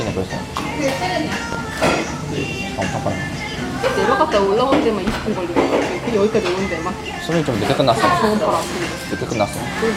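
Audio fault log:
1.53–1.56 s and 5.08–5.12 s: loud pop, a single sharp pop each time, roughly 10 dB above the sound, likely a brief voltage spike such as static or a switch transient.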